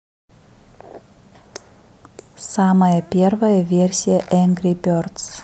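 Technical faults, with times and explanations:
Nothing stood out on listening to this speech recording.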